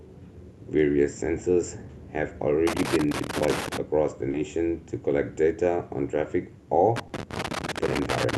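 From 2.67 to 3.77 s there is loose connector crackle: a worn contact chopping the signal produces irregular scratchy bursts, seen as scattered vertical spikes on the waveform and broadband streaks on a spectrogram. At 4.31 to 4.35 s comes short concealed packet loss: about 20 ms never arrived and the decoder extended the preceding sound, heard as a brief smear and visible as a smoothed, slightly blurred patch. The crackle returns at 6.96 s and runs to the end, with a second 20 ms concealed gap at 7.07 to 7.11 s inside it.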